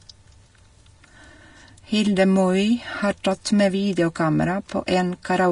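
Throughout, the speech has nothing above 10.6 kHz, and its treble sounds grainy and hissy. Likely cause: Vorbis compression, at a bitrate around 34 kbps.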